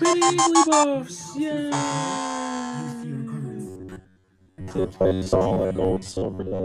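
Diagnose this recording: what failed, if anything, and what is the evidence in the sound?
From 3.67 s to the end at 6.64 s, the sound becomes a rigid, metallic buzz locked near 93.8 Hz: robotic sound from repeated short buffers, at the driver or buffer stage. The likely cause is input arriving too seldom, so the system replays the last fragment of about 10.7 ms, skipping fresh audio for most of that stretch. A spectrogram shows flat harmonics at multiples of 93.8 Hz. The waveform shows near-identical cycles repeating.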